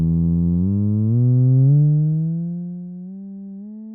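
Nothing stood out on listening to this audio.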